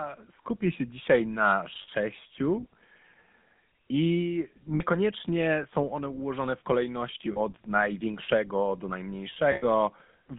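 Throughout, the speech sounds buzzy and gravelly, boxed into a band from about 200 Hz to 3.5 kHz. This is the GSM full-rate codec, which fits 13 kbps. It rebuilds the voice from a vocal-tract model driven by coarse, regularly spaced pulses, so the excitation lacks fine detail.

At 1.82 to 1.89 s, 4.74 to 4.82 s, 7.32 to 7.39 s and 9.52 to 9.64 s, the sound briefly freezes into a rough, metallic ring. These are lost GSM frames. Each gap of 60, 60, 40 and 100 ms was filled by repeating the last good frame.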